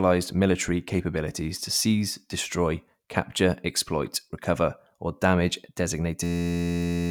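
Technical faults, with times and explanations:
6.24–7.10 s: system hang loop, an 11.61 ms fragment repeating at 86.1 Hz into a steady buzz to the end, which fits a 512-sample buffer.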